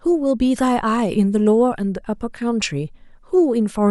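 Nothing in this bit of speech stands out as a technical fault; there's no glitch, dropout or other problem to point to anywhere in it.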